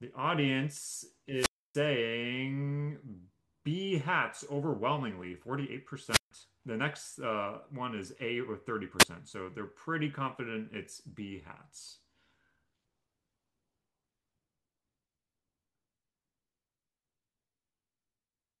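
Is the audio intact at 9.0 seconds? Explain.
No. A wireless microphone squelch dropout runs from 8.99 to 9.04 s: the FM radio link fades, hiss briefly swells, and the receiver's squelch mutes the speech for about 8.5 ms before it returns, leaving a short static-edged hole in the audio.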